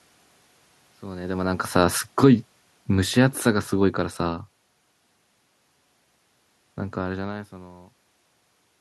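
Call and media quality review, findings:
Automatic gain falling, 1.49–4.45 s: speech and room noise sink together by about 8 dB, so gain, not talker distance. Probable component: AGC, judging the input too loud or its noise too strong and lowering its gain gradually.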